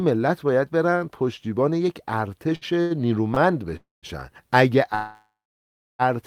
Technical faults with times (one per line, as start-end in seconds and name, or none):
2.55-2.93 short stall from a late packet
3.34-3.39 short stall from a late packet
3.76-4.06 call audio freeze
4.95-6.02 call audio freeze